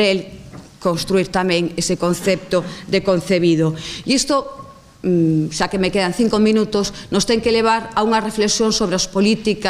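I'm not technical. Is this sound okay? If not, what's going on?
Yes, nothing in this recording points to a technical problem with the sound.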